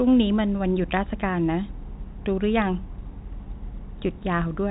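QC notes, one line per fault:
No faults found in this speech clip. The G.711 telephone coding path can be heard in the narrow phone-line bandwidth, with nothing above 4 kHz.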